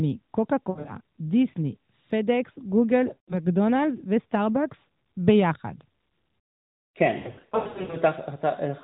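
Lost AMR speech frames occur three times in this narrowband speech, where the decoder hid frames that failed their checksum by repeating the last good pitch and vocal tract settings at falling gain. From 0.70 to 0.95 s short gaps bring brief dips and warbles. From 3.14 to 3.36 s the sound is drawn out and fades. From 7.18 to 7.97 s repeated gaps, up to 100 ms each, fade it toward silence, and it returns weak and rough.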